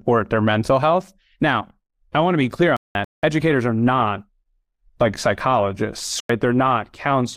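A speech clip with two sudden gaps of silence, both from corrupt frames being muted. The first runs from 2.77 to 3.23 s, nearly half a second. The second runs from 6.20 to 6.30 s, about a tenth of a second. Each cuts in abruptly. The decoder rejected damaged compressed frames, and the player filled their slots with silence. The gap lengths point to several consecutive frames lost each time. Timing around both gaps is preserved.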